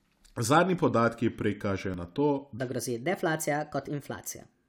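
At 1.94 s an overlap between stream segments removes a few milliseconds where two segments' time stamps collide. The waveform jumps abruptly and is heard as a brief click or skip. On a spectrogram it shows as a thin vertical broadband line.

From 2.58 s to the end the speech plays at 1.27 times its proper speed, about four semitones high, and sounds rushed and thin. This section at the wrong speed likely comes from a clock mismatch. Formants and harmonics shift upward on a spectrogram, and waveform cycles look compressed.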